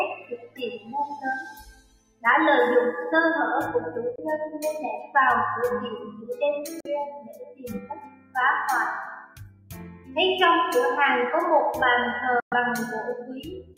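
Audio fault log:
Throughout: noise suppressor applied to music or sounds. A suppressor tuned for speech treats the steady, sustained parts of this material as noise and pulls them down while onsets pass. The level swings by around 15 dB, so the sound pumps and thins as held tones sink after each attack. On a waveform, the envelope shows sharp peaks followed by collapsing bodies. On a spectrogram, the sustained partials fade early, leaving bright onset columns above a hollow background.
0.14–0.94 s, 1.47–2.24 s, 4.99–5.15 s, 5.95–6.36 s, 7.11–8.35 s, 9.24–10.16 s, 13.22–13.78 s: sound cut by the noise suppressor. In each stretch the suppressor judged the ongoing sound to be noise and ducked it harder than the rest. The drop is deepest at about 19 dB in the first two, about 18 dB at 7.11 s, about 16 dB at the end, and about 9–12 dB elsewhere. Steady and decaying material sinks or has its tail clipped. 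A waveform shows a shrunken envelope, and a spectrogram shows darkened bands where energy should persist.
4.16–4.19 s, 6.80–6.87 s, 12.40–12.54 s: Bluetooth dropout. The output falls silent for about 23 ms, 46 ms and 116 ms respectively, likely because audio packets missed their delivery deadline on a wireless link. The lengths fit one, two and five lost packets. Playback resumes further along, as if the sound had kept running underneath. A waveform shows flat-line gaps with abrupt or briefly faded edges. A spectrogram shows clean vertical blank strips across all frequencies.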